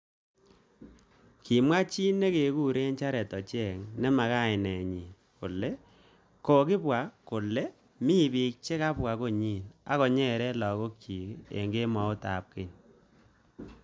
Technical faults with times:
none

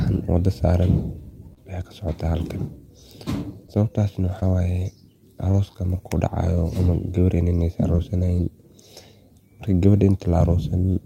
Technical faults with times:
1.53-1.59 short concealed packet loss
3.67-3.70 short concealed packet loss
4.40-4.43 short concealed packet loss
5.51-5.55 short concealed packet loss
7.95-8.00 short concealed packet loss

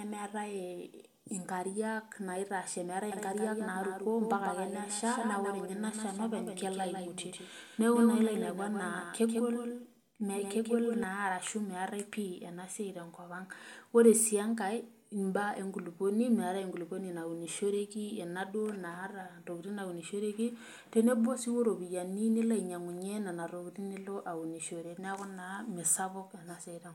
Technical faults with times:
3.12-11.04 doubled audio track

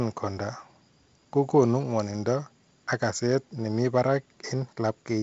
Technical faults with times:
none

